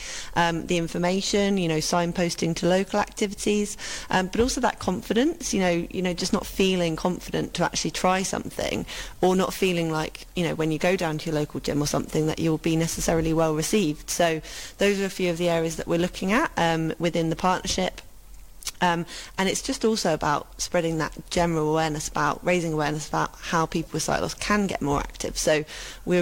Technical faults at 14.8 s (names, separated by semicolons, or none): crude rate conversion